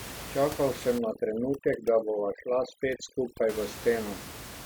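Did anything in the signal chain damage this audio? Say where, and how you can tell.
Yes. Overdone noise removal in the call processing stage, from 0.98 to 3.49 s. An over-aggressive suppressor drives bands near its noise estimate almost to zero, so the room noise, about 13 dB under the speech, collapses into twinkling specks and quiet parts of the speech are lost along with it.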